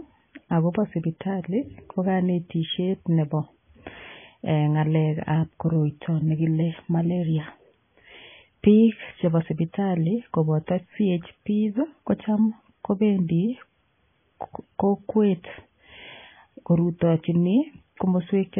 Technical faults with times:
0.00-18.59 MP3 compression

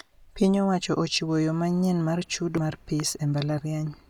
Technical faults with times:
2.57 damaged data in a compressed stream

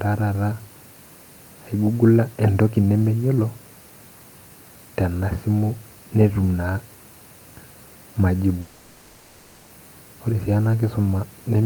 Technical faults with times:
8.61-9.71 long network dropout

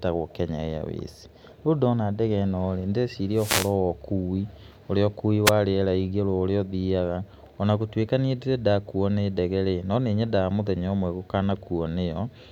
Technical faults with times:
3.34-3.74 wireless microphone noise hit
5.45-5.51 wireless microphone noise hit

